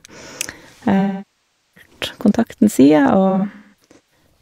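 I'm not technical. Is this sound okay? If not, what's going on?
No. The speech has AAC frame loss with concealment: from 0.99 to 1.90 s, and patchily from 3.29 to 4.24 s, chunks of audio went missing. The player guessed at them. In the first stretch the sound fades down to a very faint hiss and then back in. The later stretch is left smeared and hissy rather than having the clean silence of a simple dropout.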